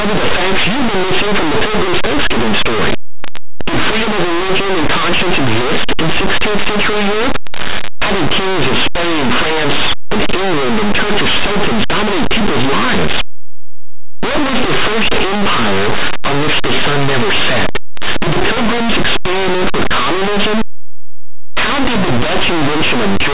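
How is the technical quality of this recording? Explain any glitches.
The technical quality is poor. The speech comes with very loud, harsh distortion for the entire clip.

Linear audio read as companded, throughout: plain linear 8-bit samples are being decoded as mu-law codes. Samples just to one side of zero expand into the loudest outputs, while those on the other side stay small. Even quiet passages therefore blast as very loud, coarse, grinding distortion.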